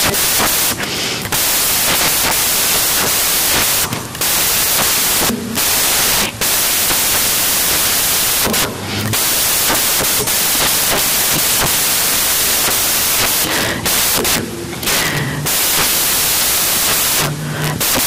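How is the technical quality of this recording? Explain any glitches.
Poor: loud white noise runs from start to finish, harsh and broadband on the louder speech. The fault is samples built from the wrong bytes. The reader has assembled each sample incorrectly, whether offset by a byte, with the byte order swapped or with a mismatched alignment. That pushes the rapidly changing low-order bits into the most significant position, so every value becomes essentially random, high-level noise wherever the original signal carries any energy.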